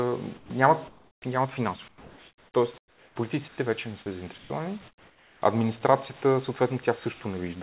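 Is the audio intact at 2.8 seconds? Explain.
No. From 2.78 to 3.16 s, about 380 ms, the background is replaced by comfort noise: a steady, featureless hiss about 11 dB quieter than the room sound around it, which sits about 27 dB below the loud parts. The likely cause is discontinuous transmission: the sender's voice detector judged the pause silent and stopped sending, so the receiver generated synthetic noise, band-limited like the rest of the call to below 4 kHz.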